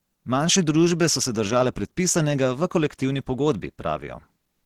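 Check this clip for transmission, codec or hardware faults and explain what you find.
One fault runs through the whole clip: the speech sounds hoarse and muffled, with grainy, noise-filled upper frequencies rather than clean detail, and the damage is plainly audible. This is likely Opus compression in its hybrid mode, which codes the lower band with a speech model and fills the upper band with coarse band energies and noise. The roughness fits a bitrate around 16 kbps, even though the full bandwidth is kept.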